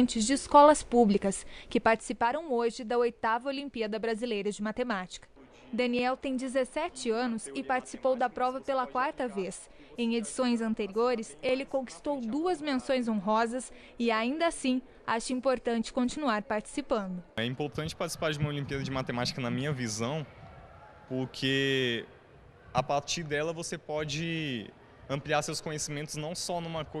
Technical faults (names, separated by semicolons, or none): zipper noise